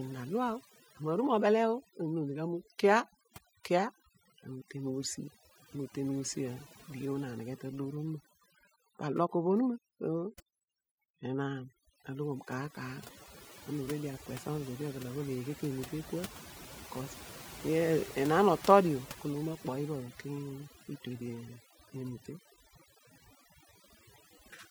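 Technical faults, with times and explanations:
Throughout, overdone noise removal: noise reduction set far too strong cuts bands near the noise floor, leaving twinkling near-silence between phrases and taking quiet parts of the voice with them.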